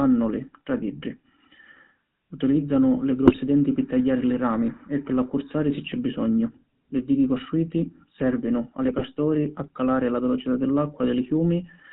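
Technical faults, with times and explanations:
Throughout: GSM full-rate codec. The whole clip has that buzzy, gravelly edge, and it's plainly audible. The coder rebuilds the voice from a vocal-tract filter driven by sparse, regularly spaced pulses. Nothing above 4 kHz survives, which fits the 13 kbps full-rate GSM.
3.26–3.38 s and 8.88–9.02 s: GSM bit errors. Each is a short burst of squawk and gargle, the first just before "denti pi tagghiari li". Flipped bits corrupted the filter, pitch or gain values, bending the spectrum for a handful of 20 ms frames.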